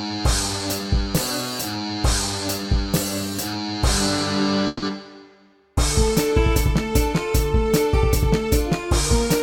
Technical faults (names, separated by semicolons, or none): call audio freeze